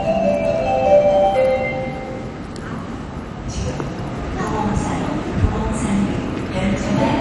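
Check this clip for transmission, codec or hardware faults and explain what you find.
There's one fault, and it runs the whole way through. It sounds like MP2 compression: dull, nothing above about 11.3 kHz, and a gurgling, granular texture. That's likely starved Layer II sub-bands, consistent with roughly 48 kbps.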